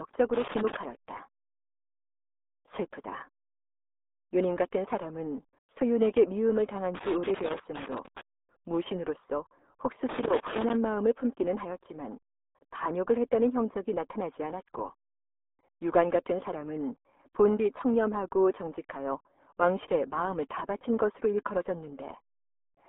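Throughout, the speech has a RealAudio 14.4 codec sound, muffled and gargly, which fits an 8 kbit/s dial-up codec. On a spectrogram, nothing appears above 3.8 kHz. Loose connector crackle appears at 0.34–0.85 s, 6.95–8.21 s and 10.09–10.74 s, where a contact is rapidly making and breaking. It sounds like scratchy bursts, and the waveform shows dense, irregular spikes.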